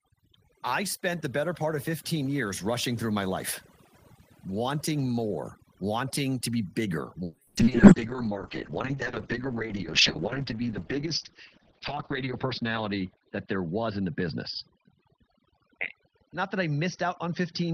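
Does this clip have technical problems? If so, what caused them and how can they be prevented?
Yes. From start to finish the background sits in an unnatural near-silence scattered with twinkling specks. This is overdone noise removal. A noise reduction stage was set too aggressively on a noisy source, so it pulls individual frequency bands far down or off whenever they come close to its noise estimate, taking the quieter parts of the speech with them. Running the reducer at a gentler setting, or cutting the noise at the source, prevents this.

From 7.26 s to the end, the speech turns rough and muffled, and the top end disappears above about 6 kHz where it had reached about 20 kHz. This is a call bitrate drop. The call's bandwidth estimate fell, and the encoder coded far more coarsely, which fits a fall from about 32 kbps to 6 kbps. At that rate Opus also discards the high frequencies. The worst stretch lasts about 4.7 s. 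A stable network connection, or a higher minimum bitrate setting, prevents this.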